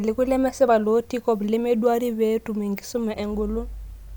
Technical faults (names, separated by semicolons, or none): none